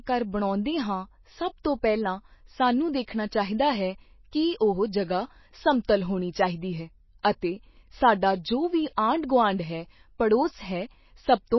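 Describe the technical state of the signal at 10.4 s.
MP3 compression at 10.4 s, as throughout: a likely bit-starved encoder, fitting about 24 kbps, removes everything above 5.8 kHz and flickers weak components, making speech watery.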